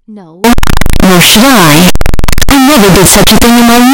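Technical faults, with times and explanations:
0.44 to 3.93 s, signed and unsigned mixed up: the speech turns abruptly into very loud, harsh distortion, with quiet stretches as loud as the rest. This is likely 16-bit samples read with the wrong sign convention, flipping the top bit so every zero crossing jumps across the full range.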